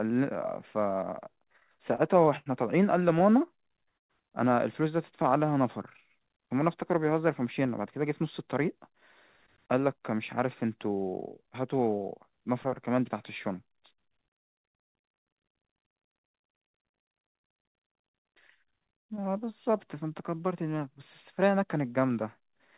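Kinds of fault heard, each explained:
Repeated stalls (stutter): Packets arrived late, so the jitter buffer ran dry and the receiver stretched the last sound to bridge each gap. From 1.46 to 2.49 s and from 3.09 to 4.13 s the speech halts in brief stutters, with waits up to 116 ms.
Jitter buffer slow-down: The buffer was low, so the receiver repeated single pitch periods to build up a reserve. Between 5.22 and 5.47 s about 41 ms is added, and the speech drags to 87% of its pace while keeping its pitch.
Jitter buffer speed-up: Excess buffered audio was trimmed by cutting out short pitch-period pieces. From 7.27 to 8.91 s the speech runs at 107%, losing roughly a tenth of a second, and from 9.58 to 10.19 s it runs at 108%, sounding hurried at unchanged pitch.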